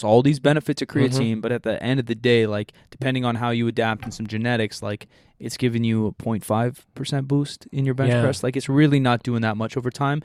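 No faults turn up anywhere in this recording; nothing breaks, drops or distorts at any point as it runs.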